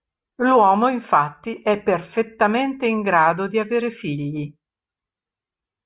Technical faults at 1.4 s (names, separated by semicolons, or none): none